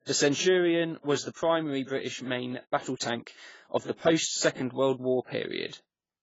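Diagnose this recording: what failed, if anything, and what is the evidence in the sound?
The speech sounds dull and smeared throughout, with nothing above 7.6 kHz and fizzy, warbling sibilants. Codec stage: likely heavy AAC compression, consistent with roughly 16 kbps.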